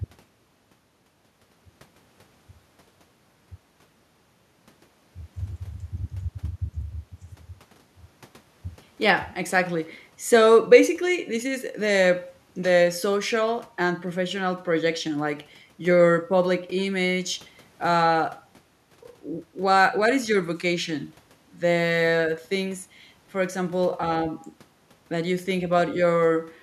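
No technical faults can be heard in the speech; the only background is the room's own ambient noise, sitting about 38 dB below the speech.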